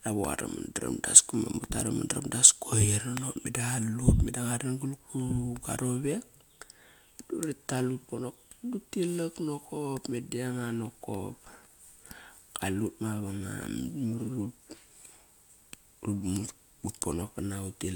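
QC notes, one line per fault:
Nothing to flag on this speech clip; I listened all the way through and didn't hear anything that needs a note.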